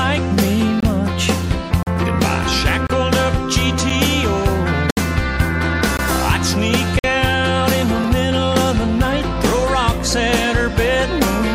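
The stream arrives in 1-second segments whose time stamps don't meet, so the player inserts silence to cover each gap between stream segments. Nothing is lost, but the sound drops out abruptly, with hard edges, at 0.80–0.83 s, 1.83–1.87 s, 2.87–2.90 s, 3.9 s, 4.90–4.97 s, 5.97 s, 6.99–7.04 s and 8.04 s. These holes recur about once per second and range from about 3 ms to 67 ms, with the longest at 4.90 s.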